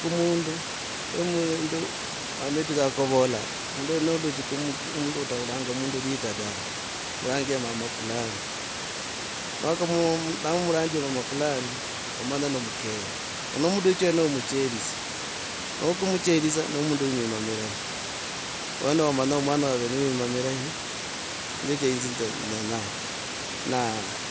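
Nothing stood out on listening to this speech, which comes through a Bluetooth headset link with bandwidth topping out at 8 kHz and the room's background noise sitting about 10 dB below the voice.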